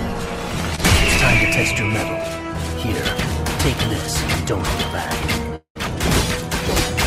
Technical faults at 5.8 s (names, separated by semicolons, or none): long network dropout